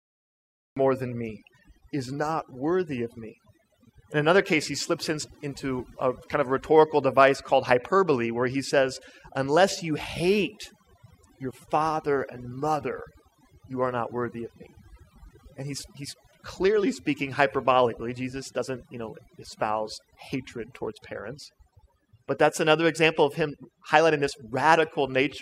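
The clip opens on dead digital silence, and then at 0.77 s the speech just lands mid-sound, right before "than me is not". That's a cut-off start: the recording kicked in late, so there's no natural attack or fade-in, just an abrupt jump from nothing.

Running through the whole thing is overdone noise removal. A noise reducer set far too aggressively is dropping individual frequency bands whenever they sit near its noise estimate, and quieter parts of the voice get pulled down with them. You hear it as a near-silent background with little twinkling specks.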